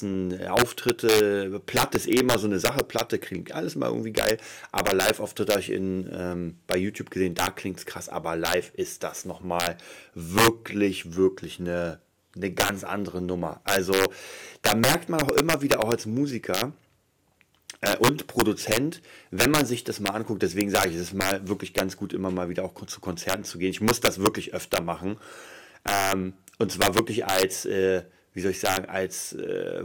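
Integer overflow runs through the whole speech recording. The signal is driven about 10 dB past full scale, and the arithmetic wraps rather than saturating. Any sample exceeding the integer limit flips to the opposite extreme of the range. Only a small share of samples, well under one percent, cross that limit, so the damage sits on the loudest peaks. Each one produces a violent, sharp crack, far harsher than ordinary clipping.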